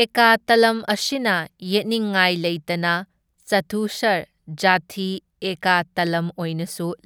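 No technical faults can be heard anywhere in the speech recording; the signal stays continuous and steady throughout.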